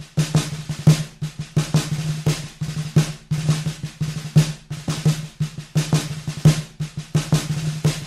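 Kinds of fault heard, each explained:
No technical faults can be heard in this audio.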